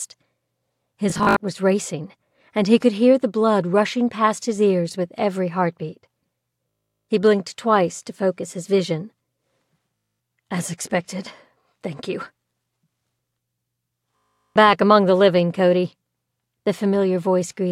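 The audio has Bluetooth stutter at four points: 1.10 to 1.40 s, 7.09 s, 9.96 to 10.20 s, and 14.19 to 14.56 s. Packets arrived late or not at all, so the receiver kept replaying its last short slice. That gives a brief buzzing, machine-gun repeat. The first event is broken up, with gaps spread over about 300 ms. The sound then jumps ahead, skipping roughly 190 to 410 ms of material each time.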